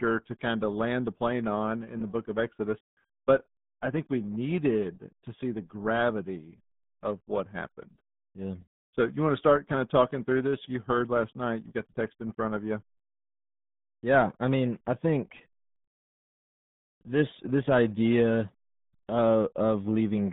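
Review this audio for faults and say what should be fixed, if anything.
The whole clip has that RealAudio 14.4 codec sound: muffled, gargly speech squeezed into roughly 150 Hz to 3.6 kHz, nothing above 3.8 kHz, consistent with a heavily starved 8 kbit/s stream. Go back to the original source, or re-encode with a modern wideband codec at a sensible bitrate.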